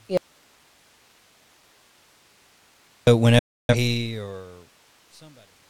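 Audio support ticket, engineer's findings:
Audio dropout to a faint residue, 0.17–3.07 s. Signal gone for 2.9 s, only hiss left, roughly 35 dB down. Likely an input connection break, path after it still live.

Digital broadcast dropout, 3.39–3.75 s. Hard mute of 0.3 s with a 3 ms fade. Receiver muting on failed frames, which fits about seven lost frames. Occurs as the smooth fade-out begins, which runs to 5.69 s.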